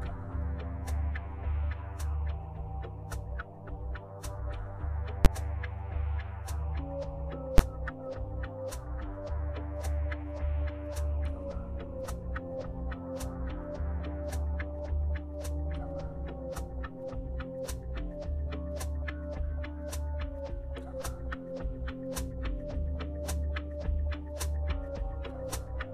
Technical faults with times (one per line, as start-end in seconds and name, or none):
5.25 invalid numbers at full scale
7.58 invalid numbers at full scale